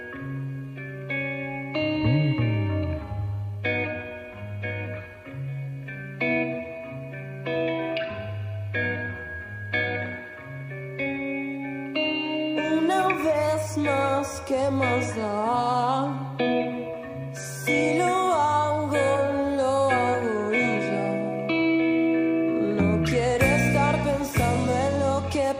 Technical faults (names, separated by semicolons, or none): none